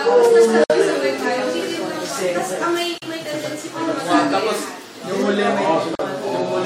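At 0.64 s the sound stops dead for about 59 ms, then again at 2.98 s and 5.95 s for about 40 ms each. These are gaps at a join of encoded pieces: each segment was encoded on its own, and the encoder's start-up silence and padded final frame were never trimmed before joining. Unlike a dropout, nothing is lost. The sound resumes exactly where it left off, and the codec smears the edges.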